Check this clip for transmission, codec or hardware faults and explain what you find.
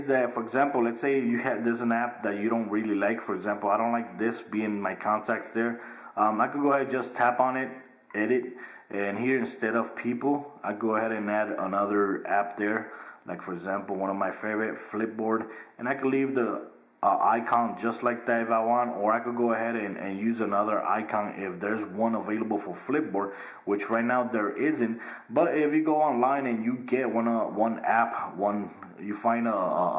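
No transmission, codec or hardware faults turned up in this clip.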